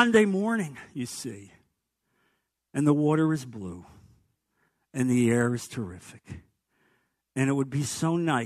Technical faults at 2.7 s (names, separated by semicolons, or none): none